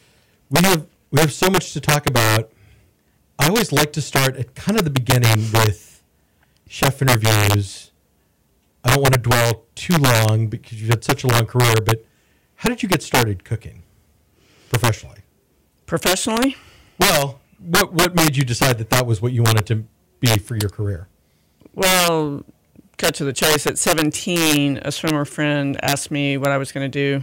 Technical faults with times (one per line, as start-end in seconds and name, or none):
0.00-27.23 integer overflow